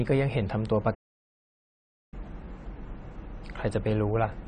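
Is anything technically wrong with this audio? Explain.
Yes. There are two problems.

AAC compression affects the whole speech clip. The top of the spectrum is cut away. The damage is plainly audible. The sound is dull and smeared, and sibilants have a fizzy, warbling edge. This is likely from AAC-LC coding at a low bitrate, one that fits about 32 kbps. The encoder drops high bands and quantises the rest coarsely to save bits.

A playback stall runs from 0.94 s to 2.14 s. The sound stops mid-flow and goes silent for about 1.18 s. It then resumes. The likely cause is that the player ran out of data or its thread was blocked. Output could not continue until it recovered, which leaves an abrupt gap.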